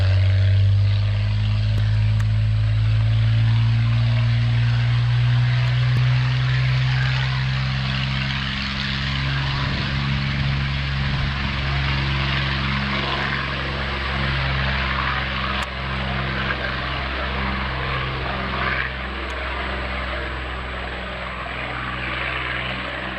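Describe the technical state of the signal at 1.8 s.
At 1.78 s there is a block of digital silence lasting about 1.3 ms, which fits a 64-sample buffer the program failed to fill in time. The waveform drops abruptly to a flat zero line and back, drawing a thin vertical broadband stripe on a spectrogram, heard as a sharp tick.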